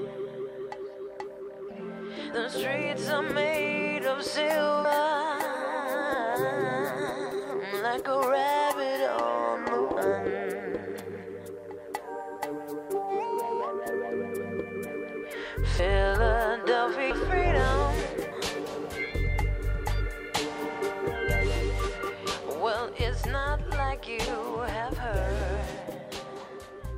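Compressed frames skipped: the decoder drops whole blocks of the encoded stream, either missing or rejected as damaged, so playback leaps forward. It happens at 2.32, 4.85 and 7.31 s, each time losing roughly 70 ms, about two frames of what sounds like a 32 ms frame length. Then at 9.97, 15.79 and 17.1 s roughly 150 ms, about four frames, vanishes.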